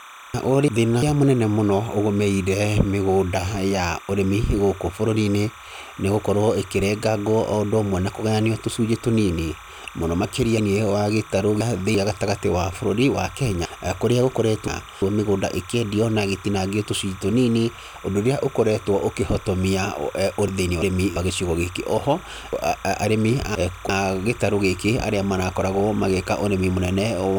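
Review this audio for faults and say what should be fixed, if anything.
Timecode bleed runs through the whole clip: a steady chirping warble about 20 dB below the speech. Linear timecode at 29.97 frames per second has leaked in from a neighbouring track or cable. Its square wave flips between pitches around 1 kHz and 2 kHz as the bits change, which creates the warble. On a spectrogram it shows as two persistent bright horizontal bands near 1 and 2 kHz with faint odd harmonics above them, present even in pauses. Keep timecode on a separate, well-shielded cable and track, away from audio lines.

Chunks out of order appear at 0.34–1.02 s, 10.58–11.95 s, 13.65–15.02 s, 20.48–21.16 s and 22.53–23.89 s. In each case a block of about 341 ms plays late, after the blocks that should follow it: one block late at 0.34 and 20.48 s, three late elsewhere. Nothing is missing, but the sequence jumbles, and there are three hard joins at each event. 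A waveform shows abrupt discontinuities at 341 ms boundaries, and a spectrogram shows vertical broadband lines with formant tracks jumping out of sequence. Number chunks and reorder them by sequence before playback or writing.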